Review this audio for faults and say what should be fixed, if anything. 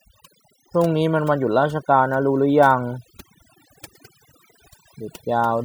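Overdone noise removal runs through the whole speech clip. The denoiser pushes frequency bands near its noise estimate down hard. Quiet parts of the voice vanish with them. The background drops and breaks up into twinkling specks. Use a gentler reduction setting.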